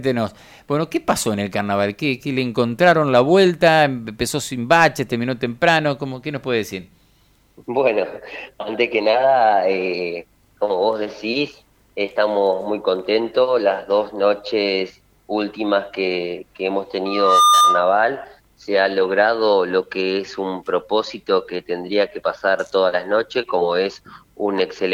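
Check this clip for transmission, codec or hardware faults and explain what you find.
There is one fault: loudspeaker feedback squeal from 17.05 to 18.0 s. A microphone was picking up the loudspeaker it fed, and around 1.2 kHz the gain round that loop rose above one, so that frequency reinforced itself on every pass. In the sound, a single steady tone swells up over less than half a second, rings at roughly a few decibels above the surrounding audio, and cuts off just before 18 s.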